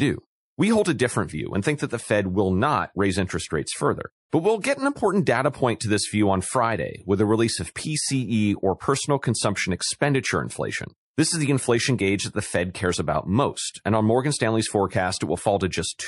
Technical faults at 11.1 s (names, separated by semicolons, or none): MP3 compression